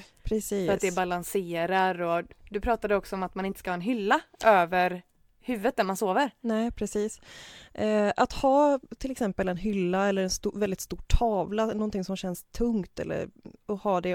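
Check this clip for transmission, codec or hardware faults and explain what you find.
Nothing in the speech signal points to a transmission, codec or hardware problem; it is continuous and steady throughout.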